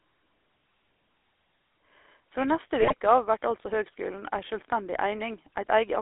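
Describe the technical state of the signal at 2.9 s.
At 2.9 s the speech is in a burst of GSM bit errors, from 2.80 to 2.94 s, just before "av vert altså høgskulen". Flipped bits corrupt the decoder's filter, pitch and gain values, so the speech squawks and gargles rather than dropping out or repeating as lost packets would. Underneath, throughout, sits the GSM full-rate codec. Its pulse-driven vocal-tract model gives a buzzy, gravelly roughness within a band of roughly 300 Hz to 3.6 kHz. This points to the 13 kbps codec rather than simple band-limiting, which would only muffle.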